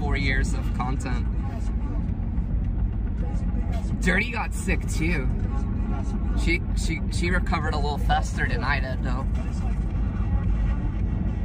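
Nothing stood out as a technical problem on listening to this audio.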